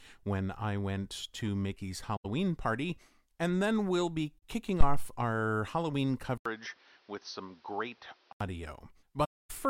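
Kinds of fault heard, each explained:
AAC frame loss with muting: the decoder lost whole frames and zeroed them, so the speech fades out and back in with soft edges. There are three such holes here, about 85 ms at 2.16 s, 43 ms at 4.39 s, and a long 256 ms gap near the end at 9.24 s.
Phantom power thump: a supply switching on a live input sends a step through the coupling capacitors. Here it's a deep thump starting at 4.81 s that dies away in about 75 ms, within an event lasting until about 5.14 s.
Input switched to a poorer device: at 6.38 s there's an 80 ms dropout, and then the speech turns dull, with nothing above 6.2 kHz, a few dB quieter and with a noise floor only around 30 dB down. That likely means the recording jumped to a weaker mic until about 8.41 s.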